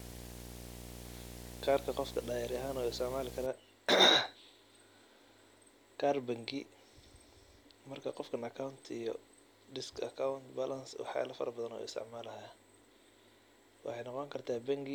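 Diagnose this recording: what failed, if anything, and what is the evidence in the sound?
Video or display buzz, analogue wiring: from 0 to 3.46 s a buzz at the 60 Hz field rate, with hash above it, sits roughly 10 dB below the speech. A screen or video cable is coupling picture-rate interference into the audio path before conversion.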